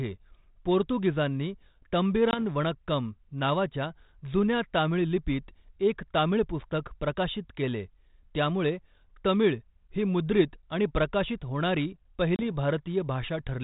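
At 2.31 s the speech drops out for 20 ms, with a hard-edged silence. This is packet loss on an ADPCM call, with a couple of packets gone. The decoder's adaptive predictor and step size lose track of the sender's. When sound resumes, it comes back slightly distorted until about 2.39 s. At 12.36 s a longer 30 ms gap, about three packets, repeats the pattern and recovers by 12.44 s. The band-limited telephone sound fits 32 kbit/s G.726 ADPCM.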